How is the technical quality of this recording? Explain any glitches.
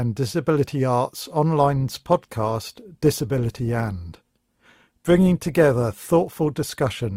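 The quality drops partway through: from 1.59 s to the end, the speech has the sound of an adaptive stream at a lower bitrate. The change is abrupt and has no gap. The streaming player appears to have switched to a cheaper encoding after the connection slowed, which fits a step from roughly 64 kbit/s down to about 24 kbit/s Opus. From that point codec artefacts become more noticeable.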